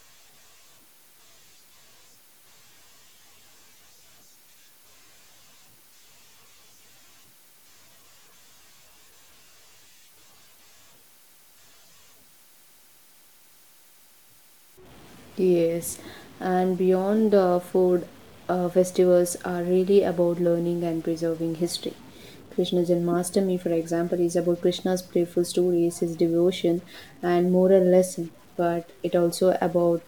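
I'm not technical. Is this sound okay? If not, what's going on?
No. Throughout the recording, speech carries a faint grainy noise that also fills the pauses, likely from a stuck bit, one digital bit fixed on or off.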